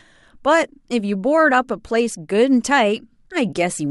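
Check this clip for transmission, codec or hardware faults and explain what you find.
Sample clock jitter is present from 2.34 s to the end of the clip. The converter's clock wanders by somewhere under a microsecond, so samples land slightly off time, and the error tracks waveform slope. The speech gains a faint hiss and roughness, roughly 45 dB below the signal, strongest on loud, bright sounds and absent in pauses.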